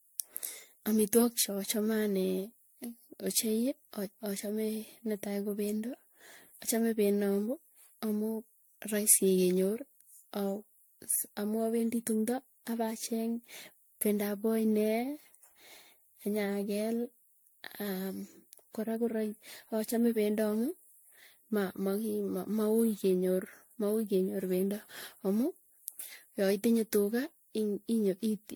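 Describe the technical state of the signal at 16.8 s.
At 16.8 s the speech shows generation loss, present throughout. It sounds swirly, hollow and smeared, with blurred attacks, likely from roughly ten successive MP3 re-encodes.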